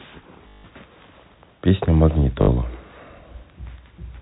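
At 0.48 to 0.64 s and 2.42 to 2.48 s, packet loss with last packet repeated loops audio into a robotic stutter buzzing near 50 Hz, fitting 20 ms packets.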